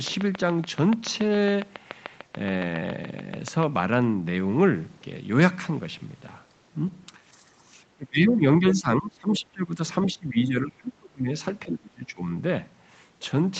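Speech suppressed in double talk from 7.57 to 7.72 s, 7.96 to 9.8 s, 10.06 to 11.3 s and 11.65 to 12.29 s, likely because the echo canceller mistook overlapping talk for echo. The speech dips by about 10 dB, then about 20, 30 and 25 dB. Other side's voice leaking through at 9.33 to 9.39 s and 10.06 to 10.12 s, likely residual loudspeaker echo the canceller missed, as brief scraps about 15 dB below the speech.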